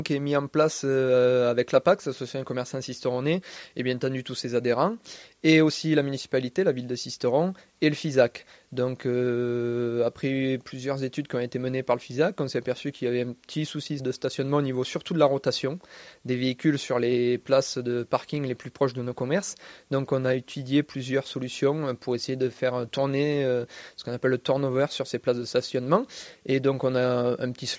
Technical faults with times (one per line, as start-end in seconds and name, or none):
none